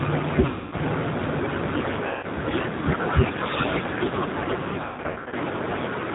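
Throughout, the G.729 codec at 8 kbit/s gives rough, synthetic-sounding speech, and the spectrogram shows nothing above 4 kHz. VoIP packet loss concealed by the speech codec occurs at 0.46–0.75 s (260 ms lost), at 2.07–2.26 s (160 ms), and in scattered gaps across 4.84–5.35 s with runs up to 140 ms. Each time the decoder stretches its last sound into a fading buzzy tone or coloured noise, which looks like smeared, flat energy and a shrinking waveform envelope.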